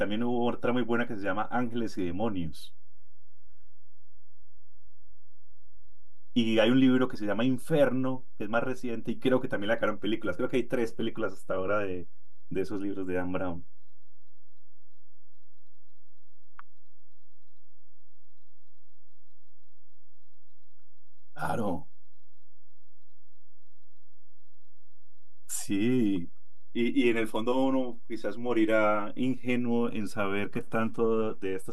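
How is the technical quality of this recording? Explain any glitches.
The recording carries one technical fault, present from start to finish.

DC offset, throughout the clip: the entire speech waveform sits displaced from the zero line by a constant amount, at about -29 dBFS. Some stage in the capture or processing chain added a steady voltage or numerical bias to every sample. It cannot be heard as a tone or noise. Instead it eats into headroom on one side of the waveform and appears as fixed energy at the very bottom of the spectrum, at 0 Hz.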